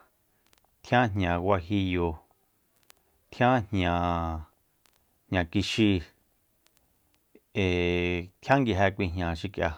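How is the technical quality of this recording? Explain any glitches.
No technical faults audible in the recording, so there are no glitches to explain.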